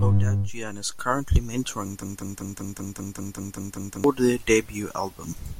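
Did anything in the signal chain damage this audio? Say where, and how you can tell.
Yes. From 2.03 to 4.04 s, a 194 ms fragment repeats exactly ten times: a broken-record loop, likely a stalled player or stream resending its last buffer.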